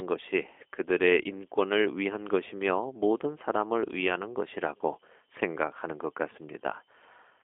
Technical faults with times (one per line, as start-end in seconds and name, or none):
0.00-7.44 G.729 codec